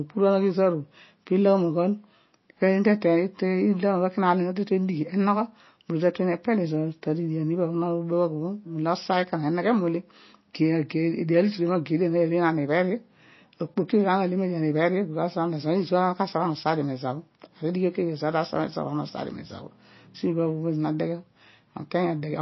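Throughout the speech, the audio has likely passed through MP3 compression at a very low bitrate, one that fits roughly 24 kbps. Short of bits, the encoder discarded everything above 5.8 kHz and zeroed weaker frequency lines, which flicker on and off from frame to frame. The damage is plainly audible: the sound is dull and band-limited, with a watery, swirling texture, metallic chirps on s sounds, and smeared attacks.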